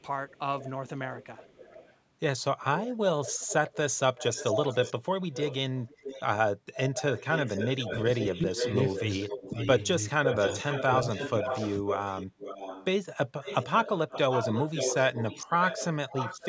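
From 0.00 to 1.97 s a faint delayed copy of the speech trails it by about 0.46 s, well below the main level. From 2.76 to 12.85 s it returns much stronger, nearly as loud as the talker, at about 0.49 s delay, and again from 13.43 s to the end at about 0.52 s. This is echo leak, likely a far-end loudspeaker echo the canceller failed to remove.

Inside that stretch the speech suppressed in double talk: the talker dips by about 10 dB in pieces between 7.9 and 9.56 s, drops sharply at 10.2 s, and sags slightly at 11.41 s. Overlapping talk likely pushed the canceller to attenuate both the talker and the echo.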